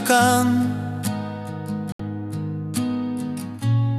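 At 1.92 s the sound abruptly cuts to silence and returns at 2.00 s, a hole of about 72 ms of lost programme. This is a digital broadcast dropout: the receiver muted on bad or missing frames, which fits roughly three lost frames.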